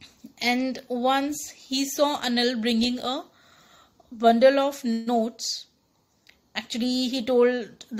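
At 4.93 s the sound stalls and its last moment stretches into a brief fading buzz for about 132 ms, until 5.09 s. The audio then picks up exactly where it stopped, with nothing skipped, and everything after runs 132 ms later than before. This is a call audio freeze. The likely cause is packets delayed in transit, draining the jitter buffer so the receiver extended the final sound until the late packets arrived.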